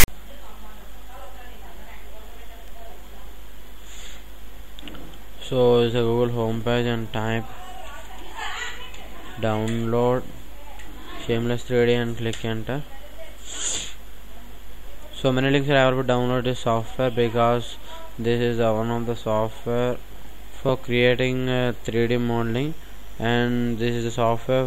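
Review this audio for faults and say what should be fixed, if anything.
The clip opens with file tags played as audio from 0.00 to 0.08 s. Text tag bytes decoded as samples give a hard-edged, lopsided rasp, then zero padding drops to silence. Unlike a codec click, its fixed position at the very start marks it as metadata. Have the decoder skip the tag block by its declared size before reading sample data.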